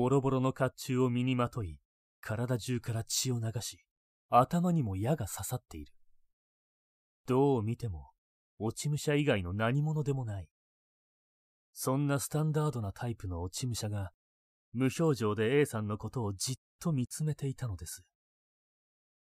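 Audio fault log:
No fault audible in this speech recording.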